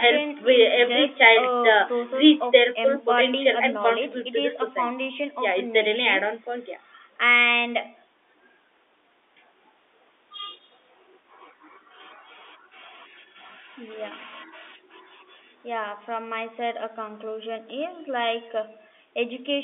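Nothing in this speech recording points to a technical fault; it carries the narrow band of ordinary G.711 telephone coding, roughly 250 Hz to 3.6 kHz, which is how that line is meant to sound.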